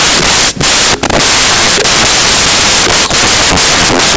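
A speech recording is buried under loud, harsh broadband noise from start to finish, the signature of samples built from the wrong bytes. The decoder is assembling each sample incorrectly, whether by a one-byte offset, swapped byte order or a wrong alignment assumption, so the rapidly fluctuating low-order bits land in the most significant positions.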